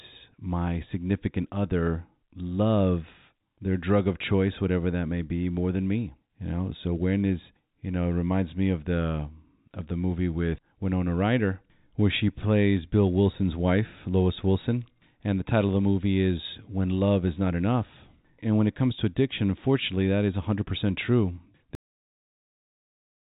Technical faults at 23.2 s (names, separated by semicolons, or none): cut-off end